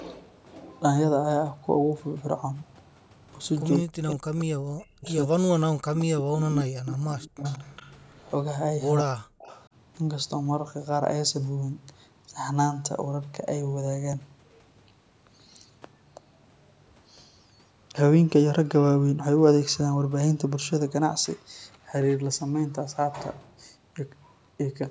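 Between 3.74 and 9.66 s, the far end is likely on a loudspeaker whose echo canceller fails to remove what its microphone picks up, so an echo leak returns a copy of the speech about 181 ms late. The echo is heard at 3.74–4.45, 5.08–5.13, 5.95–6.03, 7.44–8.16 and 9.41–9.66 s. It sits about 25 dB below the speech, except for a louder burst at 5.95–6.03 s that is only about 15 dB down, and it sounds like a faint double trailing behind.

In the same stretch, speech is suppressed in double talk. With both sides talking, the canceller likely can't tell the local talker from the loudspeaker echo and turns everything down. From 3.83 to 7.44 s, and again at 9.02–9.26 s, the speech drops by as much as about 40 dB, for about 3.2 seconds in total.

At 14.13 s comes a repeated buffer. New audio failed to arrive in time, so the device played the previous block a second time. The repeated piece is about 5.8 ms long, which fits a 256-sample buffer. 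Because it is so short and ends at a hard join, it comes across as a click or brief buzz rather than an audible stutter.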